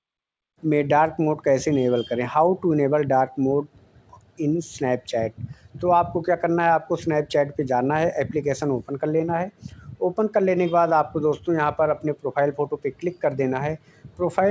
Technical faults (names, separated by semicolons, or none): none